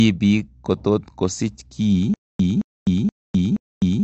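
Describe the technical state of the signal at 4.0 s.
At 4.0 s the clip is inside a stutter with silent gaps: from 2.14 s to the end, the same 220 ms fragment of speech plays, then drops to about 255 ms of dead digital silence, cycling every 475 ms, four times in all. The likely cause is a stalled player or stream replaying its last buffered fragment at each retry and then running dry, so the speech meant for that stretch is simply missing.

Under that, the sound is dull and band-limited, with nothing above 8 kHz and a plainly audible smeared, warbling texture, especially on sibilants. This is the signature of AAC compression, likely AAC-LC at a low rate that fits around 32 kbps. The encoder lowers its cut-off and coarsely quantises or drops spectral bands to fit the budget, which strips the top end and leaves those fizzy, unstable artefacts.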